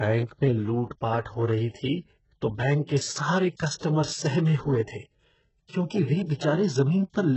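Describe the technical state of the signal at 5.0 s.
At 5.0 s the speech has a gritty, metallic edge, with sibilants coming out lispy, and nothing at all above 8 kHz. The damage is heavy and runs through the whole clip, not just this moment. The likely cause is HE-AAC compression at a very low bitrate, around 8 kbps. The codec keeps only the lower band and fakes the treble by copying those bands upward under a coarse envelope, so the rebuilt harmonics no longer line up with the real ones.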